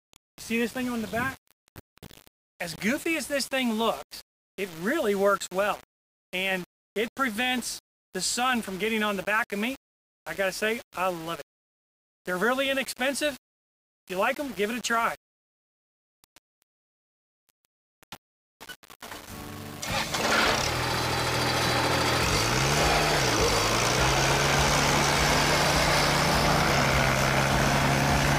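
Throughout, grainy distortion tracks the sound, sitting roughly 20 dB below it, likely low bit depth without dither at about 5 bits; unlike steady hiss, it vanishes in silence.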